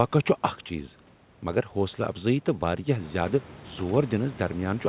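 No technical faults are present in the speech; the room noise rises by about 11 dB at roughly 3 s and then sits about 21 dB below the speech, and nothing is heard above 4 kHz, which fits the narrowband limit of a G.711-style telephone codec on the call path.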